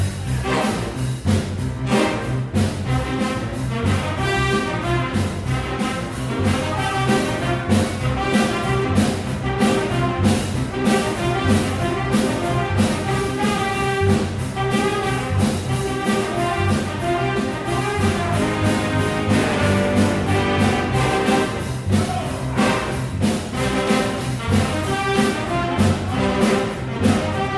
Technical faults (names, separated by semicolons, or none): none